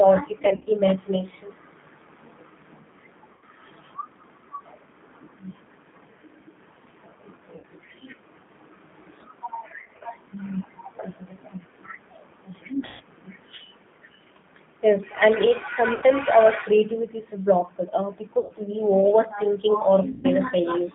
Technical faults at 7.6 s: G.729 codec; VoIP packet loss concealed by the speech codec

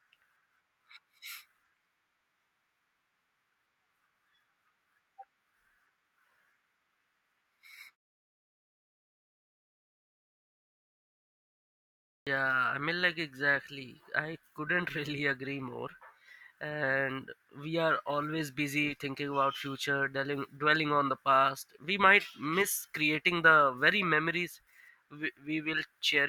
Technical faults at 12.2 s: clipped start after a pause

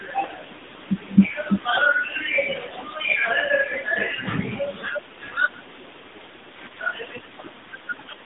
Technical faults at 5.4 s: AMR narrowband mobile codec

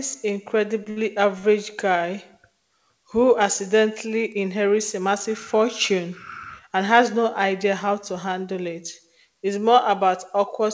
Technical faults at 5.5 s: none

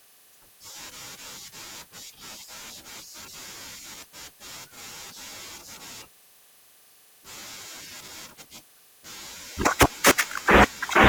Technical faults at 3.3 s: compressed frames skipped

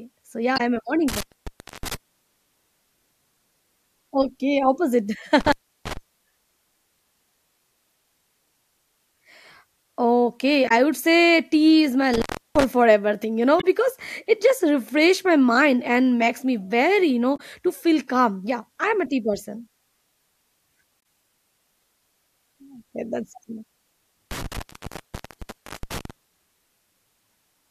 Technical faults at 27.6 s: none

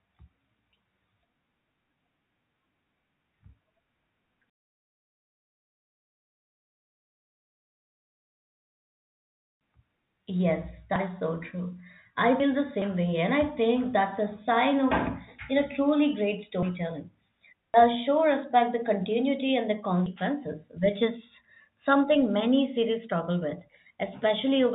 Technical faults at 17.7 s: dropped buffer (overrun)

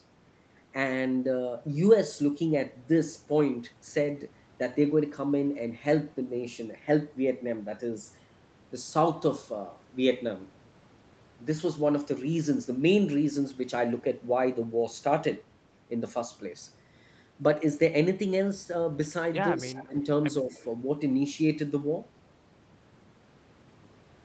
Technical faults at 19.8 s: speech suppressed in double talk; echo leak

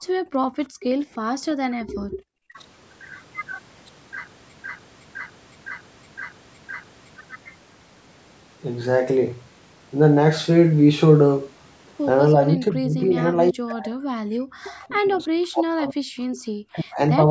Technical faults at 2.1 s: speech suppressed in double talk

